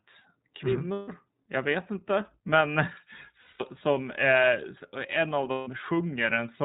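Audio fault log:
Throughout: iLBC codec. The speech is squeezed into a narrowband channel, so nothing above 4 kHz comes through, and the frame-by-frame excitation coding leaves it clear but plainly rough and a bit synthetic. That fits iLBC's 30 ms, 13.33 kbps mode.
0.93–1.08 s, 3.41–3.63 s, 5.51–5.68 s: lost iLBC frames. Three gaps of about 150 ms, 180 ms and 150 ms, roughly five or six 30 ms frames each. The decoder fills them by repeating the last pitch cycle with noise mixed in, so you hear a held, slightly buzzy vowel that fades. Each gap recovers almost immediately because iLBC frames don't depend on earlier frames.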